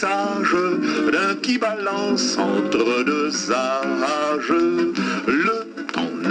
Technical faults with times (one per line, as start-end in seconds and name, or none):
none